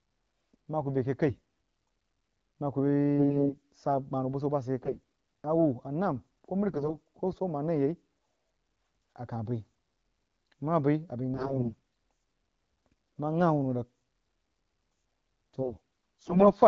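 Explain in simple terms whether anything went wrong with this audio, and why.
AMR bit errors hit the speech at 1.28, 3.18, 4.83, 6.68, 11.34 and 15.62 seconds. The weak phone link flipped some of the less protected bits, so the speech keeps its pitch and loudness but briefly turns hoarse, scratchy and gargly.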